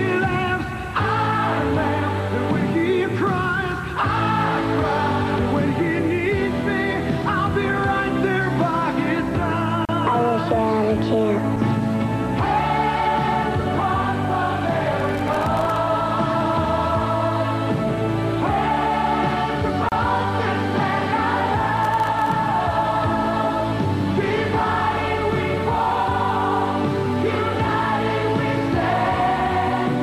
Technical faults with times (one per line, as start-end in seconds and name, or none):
9.85-9.89 gap at a join of encoded pieces
15.00-15.77 processor overload crackle
19.89-19.92 gap at a join of encoded pieces
21.77-22.32 processor overload crackle